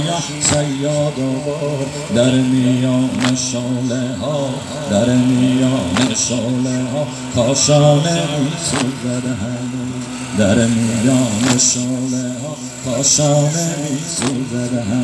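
No technical faults are present.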